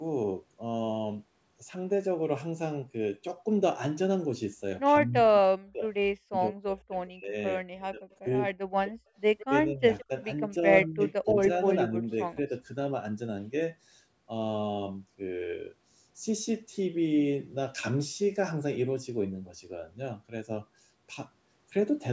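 Speech suppressed in double talk runs from 5.06 to 7.36 s, again at 7.74 to 8.25 s and 8.79 to 8.9 s. The speech dips by as much as about 40 dB and breaks into pieces, likely because an echo canceller, unable to tell the talker from loudspeaker echo while both sides spoke, turned everything down.

Echo leak appears at 9.38 to 9.46 s, a faint scrap of the speech returning 167 ms late and about 20 dB down, likely residual loudspeaker pickup the canceller failed to remove.

Suppression returns at 9.48 to 10.11 s, shallower at about 20 dB, and another echo scrap sits inside it at 9.99 to 10.05 s, about 25 dB down with the same 167 ms delay. A final suppressed stretch at 10.85 to 12.02 s dips about 25 dB.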